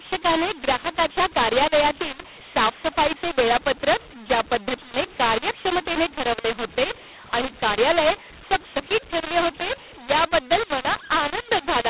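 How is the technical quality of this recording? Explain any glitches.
Poor: the speech is harshly distorted for its whole length, though the telephone-band G.711 coding itself is intact. Throughout, mu-law and A-law are mixed up: A-law samples are decoded as mu-law, scrambling levels so speech turns gritty and pauses fill with audible noise.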